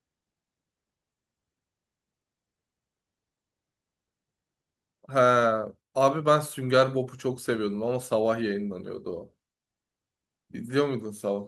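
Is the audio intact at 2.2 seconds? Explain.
Yes, the audio is intact at 2.2 seconds, with no dropout, glitch or distortion at that point beyond the ordinary coding of the call path it travelled through.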